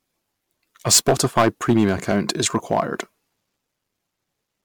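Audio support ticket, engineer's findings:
Hard clipping, 0.87 to 2.80 s. A gain stage or converter was driven about 14 dB past full scale, so waveform peaks were cut flat. The flattened tops throw harmonics high into the spectrum, which is heard as harsh fuzz on every loud sound in that stretch rather than isolated crackles. Check input gain staging and the level feeding the ADC.

Generation loss, throughout. The likely cause is repeated MP3 decode/re-encode, around seven passes, and the sound fits a 128 kbit/s setting. Each pass requantises on a shifted frame grid, so noise and spectral holes accumulate. The speech is swirly, smeared and hollow, with blurred consonant attacks, worse than one 128 kbit/s pass would give. There is no content above 19.9 kHz. Audit the transcode chain.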